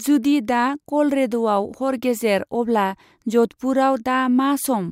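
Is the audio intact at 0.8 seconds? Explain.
Yes, the speech at 0.8 seconds plays through cleanly, with no dropout, click, distortion or other fault audible at that moment.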